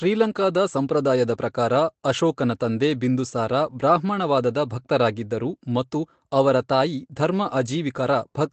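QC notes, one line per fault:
No faults were found: the speech comes through a call path whose top end stops around 8 kHz, which fits Opus at about 24 kbps, and the codec's coding noise stays at the level expected of that path.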